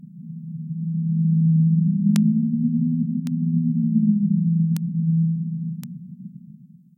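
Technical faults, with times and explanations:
2.16, 3.27, 4.77 and 5.84 s: bit error spike. Four isolated, sharp ticks with no connection to the surrounding sound. They peak at about -5 dBFS at 2.16 and 4.77 s, about -17 dBFS at 3.27 s and about -11 dBFS at 5.84 s. Each is a single broadband click because the waveform leaps by a power of two for a few samples at most, then snaps straight back. That fits one flipped bit in stored or transmitted data.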